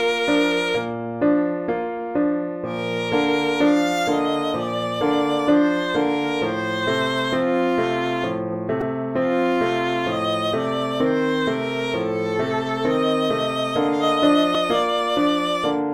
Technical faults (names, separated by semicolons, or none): repeated buffer